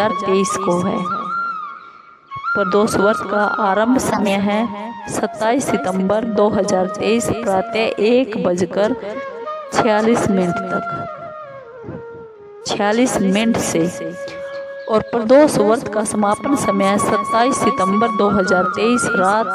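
The audio has two corrupt-frame-decoded events: a quiet blip at 1.75–1.80 s, and a loud burst from 4.09 to 4.31 s, suggesting several consecutive damaged frames played with wrong gains and misplaced spectral energy.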